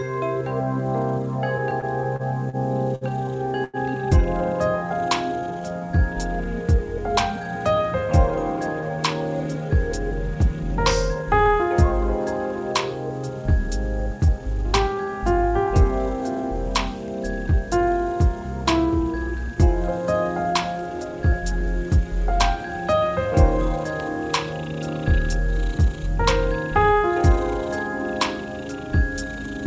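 Repeated stalls (stutter) run from 1.58 to 3.04 s. Packets arrived late again and again, so the jitter buffer kept emptying, and the receiver held the last sound through seven short gaps totalling 174 ms, the longest 61 ms. The audio drags and stutters, though nothing is lost.

A short stall from a late packet follows at 3.64 to 3.77 s. One packet missed its slot, and the receiver stretched the preceding sound for 93 ms before resuming where it left off. That sound is held too long.

Jitter buffer slow-down occurs at 4.83 to 6.45 s and again at 14.0 to 16.65 s. The receiver repeated pitch periods to rebuild its reserve, adding 151 ms and 127 ms. Playback drops to 91% and then 95% speed at unchanged pitch, so the sound is drawn out.

Jitter buffer speed-up occurs at 8.37 to 11.64 s, 18.64 to 19.57 s and 20.53 to 21.9 s. The buffer held too much audio, so the receiver cut out short pitch-period pieces, roughly a fifth of a second, about 50 ms and about 100 ms respectively. 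The audio runs at 106 to 107% speed and sounds hurried.

Throughout, nothing is heard above 8 kHz, which fits a wideband call codec such as G.722.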